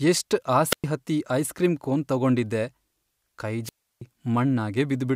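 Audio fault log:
0.70–0.84 s and 3.63–4.02 s, wireless microphone squelch dropout: each time the radio link from the microphone weakens, hiss swells briefly, and then the receiver's squelch shuts the output for about 110 ms and then about 325 ms, before speech resumes, the first time on "ಹತ್ತಿ ಐಸ್ ಕ್ರೀಂ ಕೋನ್". A spectrogram shows a short broadband noise wash followed by a blank vertical gap. The waveform shows a flat line at these points.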